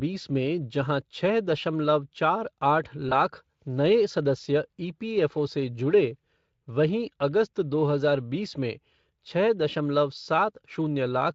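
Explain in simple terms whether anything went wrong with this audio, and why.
VoIP packet loss concealed by the speech codec, 3.09 to 3.14 s: about 20 ms of audio went missing, and the decoder stretched the preceding sound, briefly blurring it.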